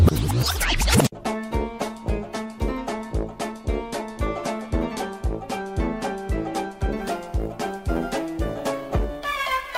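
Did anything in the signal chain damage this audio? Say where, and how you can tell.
Yes. From 6.97 s to the end of the clip at 9.78 s, the converter stage shows sample clock jitter. A hiss-like roughness rides on the audio. It is strongest where the sound is loud or bright and drops away in the quiet gaps. The converter's clock is wandering, on the order of 10 µs, so each sample lands slightly early or late. Steep parts of the waveform turn that timing error into an amplitude error roughly 25 dB below the signal.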